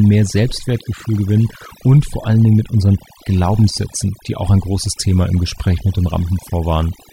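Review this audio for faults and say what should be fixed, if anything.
Overdone noise removal runs through the whole speech clip. The reduction was set so hard that individual frequency bands are pulled down or switched off whenever they sit close to the estimated noise floor, taking the quieter parts of the voice with them. Gaps fall to near silence scattered with twinkling specks. Unlike a noise gate, which mutes the whole signal at once, this works band by band, so the speckled colour persists even while speech continues. Set the noise reduction more gently and check the result by ear before committing it.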